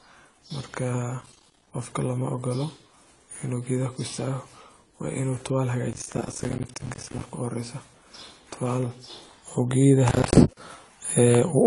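AAC compression damage runs through the whole of this speech recording. Nothing reaches above about 11.4 kHz, so the sound is dull and lacks its upper detail, and the coding damage is plainly audible as smeared, unnatural texture in the speech. This is most likely low-bitrate AAC-LC, around 32 kbps, where the encoder lowers its cut-off and starves bands of bits. Processor overload crackle appears as three bursts, from 1.21 to 1.67 s, 5.9 to 7.21 s and 10.09 to 10.57 s. Within each burst the processor repeatedly misses its deadline for short buffers of about 10 ms. Each miss drops a small slice of silence with hard edges into the speech. Strings of roughly 20 to 70 of these gaps make a gritty, tearing crackle that sits on the speech and clears once the load eases.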